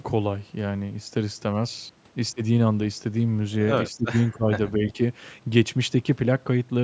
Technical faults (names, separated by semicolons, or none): speech suppressed in double talk